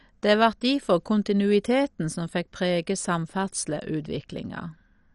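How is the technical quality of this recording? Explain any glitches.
The recording's technical quality is noticeably degraded throughout by MP2 compression. The speech sounds dull, with nothing above 11.3 kHz, and carries a gurgling, granular grit. This is likely MPEG Layer II coding at a low bitrate, around 48 kbps. Starved of bits, upper sub-bands switch off and the rest are coarsely quantised. A plain low-pass filter would sound dull but clean, whereas here the top flickers and the grain persists.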